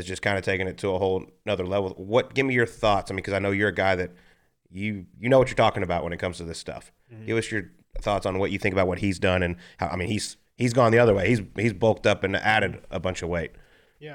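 Nothing goes wrong anywhere in this speech recording, with no dropouts, glitches or other faults turning up at any point along the way.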